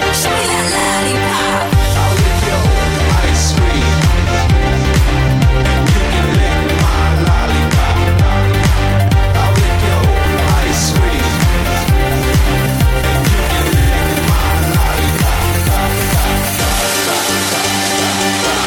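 Repeated frames occur at 0.79 to 0.88 s and again at 13.79 to 13.89 s: a 46.4 ms stretch of compressed audio was played twice more, which fits a pair of codec frames. Each instance is a short stutter and adds 92.9 ms to the audio.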